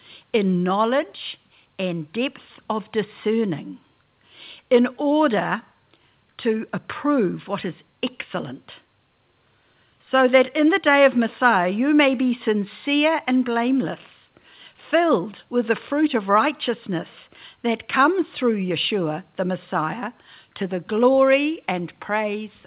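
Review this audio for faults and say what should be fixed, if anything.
No faults; nothing needs fixing.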